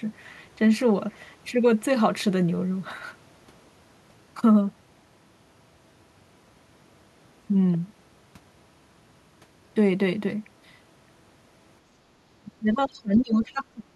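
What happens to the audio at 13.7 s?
Speech suppressed in double talk runs from 12.88 s to the end of the clip, covering 13.7 s. The voice sinks by roughly 35 dB over about a second, likely because an echo canceller, faced with both sides talking, turned down the talker along with the echo.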